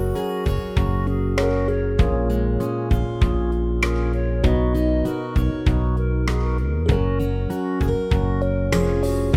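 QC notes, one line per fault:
No audible faults found anywhere in the clip.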